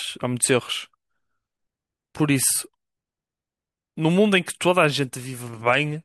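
Nothing audible in this speech recording indicates a technical fault at any point in the signal.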